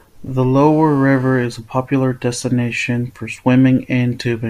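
From 0.57 to 1.45 s, before "a popular destination for", a GSM phone buzz: rectified 2G call bursts give a raspy 217 Hz rasp, unlike smoother 50/60 Hz hum.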